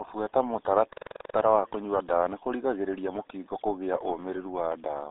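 Speech, carried for its whole length through what sounds like the RealAudio 14.4 codec, with heavy codec damage. Nothing reaches past about 3.8 kHz, and the usable band sits roughly between 300 Hz and 3.7 kHz, so sibilants and consonant edges are gone and the voice turns muffled. The gargly, smeared texture comes from a coarse low-rate speech coder, and the degree of loss fits an 8 kbit/s dial-up-era stream.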